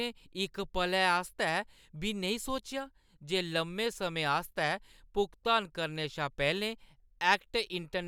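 No technical faults are audible anywhere in the speech.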